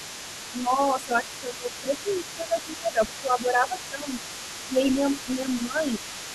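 An echo canceller likely failed to strip the far end's loudspeaker playback out of the microphone signal, so the other side's voice is leaking through for the whole clip. It sits well beneath the talker, around 15 dB down, as a faint second voice.

When both sides talk at once, the same canceller likely cannot tell the near talker from the returning echo and pulls the whole signal down, suppressing speech in double talk. The talker dips by roughly 10 dB from 0.52 to 1.93 s, 2.35 to 2.57 s, 2.77 to 3.02 s and 3.21 to 4.16 s. The dips are shallower, around 5 dB, from 4.67 to 4.78 s and 5.25 to 6.03 s. Within the longer spans, the voice ducks only in patches, not for the whole stretch.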